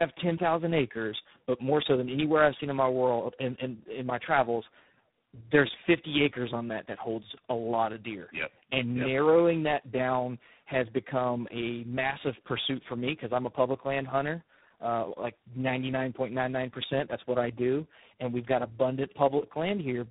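Tandem speech coding runs through the whole clip. The speech sounds rough, muffled and warbly from start to finish. Nothing is heard above 3.8 kHz. This fits a call that crossed several networks, each with its own speech codec. The sound points to three low-rate coders in a row, such as G.729A, iLBC and G.726 at 24 kbit/s. Each border decoded the speech and coded it again. Every coder worked on the previous coder's errors, so the damage stacked up.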